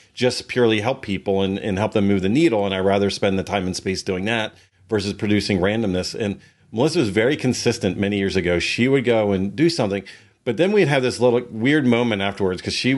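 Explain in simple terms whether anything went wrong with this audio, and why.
Nothing technical went wrong here; the speech signal stays continuous and steady all the way through, with no audible problems.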